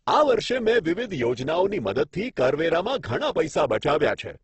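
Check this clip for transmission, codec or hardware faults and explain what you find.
One codec fault runs through the whole clip. Opus compression, likely: the speech sounds grainy and rough, with nothing above 8.2 kHz, as when a low-rate coder near 12 kbps fills starved bands with folded or noisy content.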